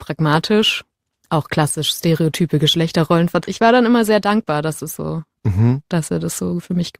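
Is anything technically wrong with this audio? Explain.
Yes. A stream segment skipped at 3.43 to 3.46 s: the speech jumps abruptly forward with a brief blip. The likely cause is a segment of the stream that failed to load, so the player continued from the next one and the missing stretch never plays.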